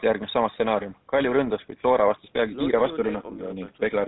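GSM full-rate codec damage runs throughout this speech: a buzzy, gravelly roughness from pulse-driven vocal-tract modelling, nothing above 4 kHz, consistent with a 13 kbit/s stream.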